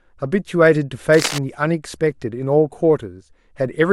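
From 1.14 to 1.42 s, cable scratch noise rasps over the speech about 10 dB down, likely a worn connector moved. It's denser and rougher than isolated clicks.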